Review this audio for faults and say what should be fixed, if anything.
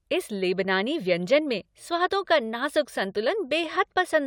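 Nothing to fix; no faults are audible.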